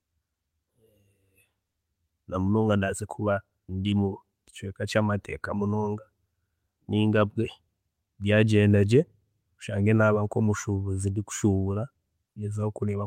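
No technical faults are audible.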